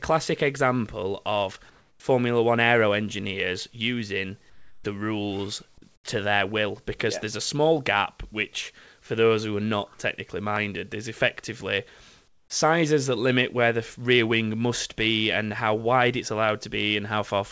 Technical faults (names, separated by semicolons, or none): comfort noise in place of the background